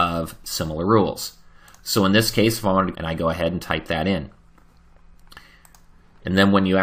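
At about 2.94 to 2.96 s there's a quick blip, and the audio lurches forward, like a chunk of the programme has been cut out and the ends butted together. That's a stream segment skipped, most likely. In segmented streaming, one segment failed to load, so the player moved straight on to the next one rather than waiting. You lose whatever that segment held, possibly a second or more, and the join shows up as that small click-like discontinuity.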